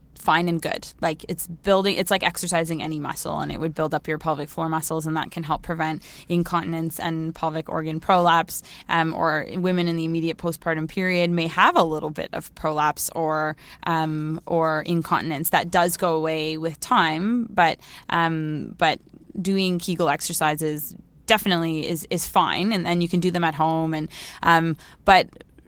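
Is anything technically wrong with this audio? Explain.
No, nothing is technically wrong.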